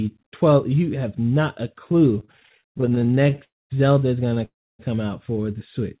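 Speech over a call line, band-limited with nothing above 4 kHz, which fits a G.711 mu-law path. Repeated stalls (stutter) run from 2.2 to 3.42 s and from 4.26 to 4.41 s. Late packets kept emptying the jitter buffer. The receiver stretched the last sound through dozens of tiny gaps, none longer than about 28 ms. About a third of each span is filler, so the speech drags and stutters. Two call audio freezes follow, from 3.44 to 3.72 s and from 4.45 to 4.81 s. The held sound fades to silence for about 0.22 s and 0.28 s, then speech resumes where it stopped. Nothing is lost, and the likely cause is packets held up in transit.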